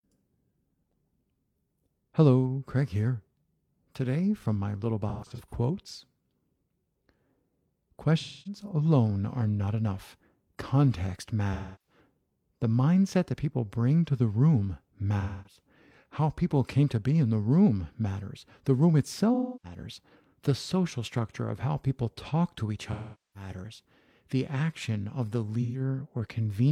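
AAC frame loss with concealment recurs through this speech at 5.08–5.54 s (gaps totalling 256 ms, longest run roughly 150 ms), 8.20–8.61 s before "alone are not enough", 11.53–11.98 s, 15.20–15.60 s after "bring to the room", 19.34–19.79 s, 22.92–23.50 s (427 ms, the longest), and 25.61–25.80 s after "action of the". The decoder patches each gap from the last good spectrum, giving smeared, noisy, phasey stretches that show as blurred, streaky spectrogram bands and flattened waveform envelopes.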